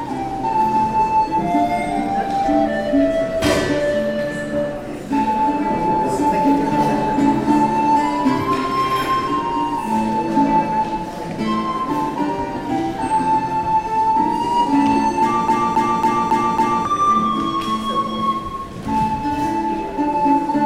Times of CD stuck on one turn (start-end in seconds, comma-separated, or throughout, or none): 15.48-16.85